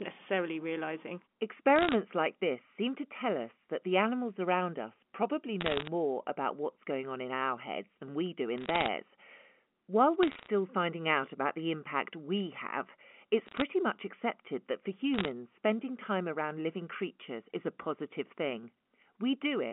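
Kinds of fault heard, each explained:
Bit errors on a digital phone line: flipped bits on the G.711 A-law line corrupt single samples, and hits on the sign or high bits become sharp ticks, heard as six short bursts of crackle between 1.76 and 15.28 s over the unchanged speech.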